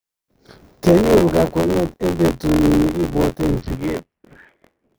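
Speech, with buffer tearing audible for the whole clip: a steady robotic buzz at about 86 Hz that sits on the speech and drops away in the gaps. That rate fits a 512-sample buffer. The writer and the hardware reader have drifted out of step and cross partway through every period, so roughly a fifth of each buffer replays audio from about 20 ms earlier. The hard splices on either side of that stale stretch repeat once per buffer, producing the rattle. From 3.60 s to 4.94 s there is a Bluetooth SBC bit pool drop. The treble goes dull and a gritty, coarse noise rides on the speech, which points to the bit pool being cut from 31 to around 5, near 50 kbps, as the link struggled. With so few bits, the upper sub-bands are starved and the remaining bands are quantised crudely.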